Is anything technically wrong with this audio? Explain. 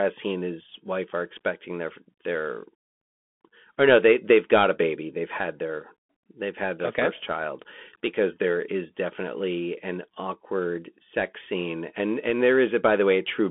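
Yes. The whole clip has been through a Bluetooth CVSD headset codec. CVSD codes each sample as a single up-or-down bit and adapts its step size, which fits a 64 kbit/s stream. The speech sits in a narrow telephone band of roughly 250 Hz to 3.4 kHz, with nothing above 3.7 kHz. The codec damage is plainly audible: loud, fast-changing sounds outrun the step size and distort, s sounds turn scratchy, and a granular hiss runs under the speech.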